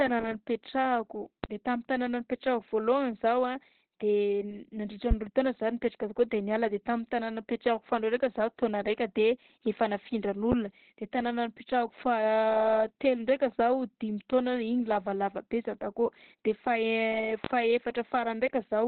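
From the start and through all 19 seconds, the speech sounds muffled and hoarse, boxed into a narrow telephone-like band with nothing above about 4.4 kHz. This is heavy Opus compression, likely at a very low rate, around 12 kbps. Starved of bits, the encoder has dropped to its speech mode and a narrowband setting, cutting the top of the spectrum and roughly modelling what remains.

At 1.44 to 1.48 s, a sharp loud pop punches through just before "de tamin'ny tanàna", peaking roughly 20 dB above the speech. Similar single pops, each roughly 15 dB above the speech and about 40 ms long, follow at 5.11 to 5.15 s, at 10.52 to 10.56 s just before "de tanàna", and at 17.44 to 17.48 s. The speech carries on underneath each one. The likely cause is a brief voltage spike from a switch, static or driver glitch, added to the signal.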